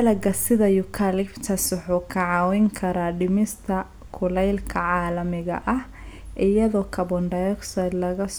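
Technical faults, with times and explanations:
Listening through the speech, nothing stood out as a technical problem at any point.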